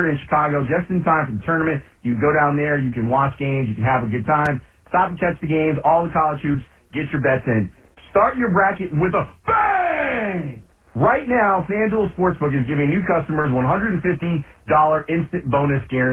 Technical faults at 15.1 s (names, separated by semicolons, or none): none